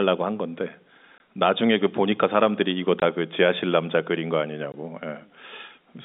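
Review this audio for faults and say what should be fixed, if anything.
Packet loss filled with silence breaks the speech three times: 1.18–1.20 s after "한 건데", 3.00–3.02 s after "그 보니까 사람들이 이거", and 4.72–4.74 s after "지하실 남자 그린 거". Each 20 ms hole fits one dropped packet. The receiver inserted silence with hard edges. Packet loss concealment at the receiver would cover these gaps.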